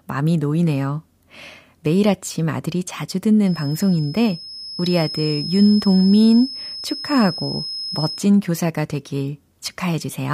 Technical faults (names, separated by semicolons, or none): feedback whistle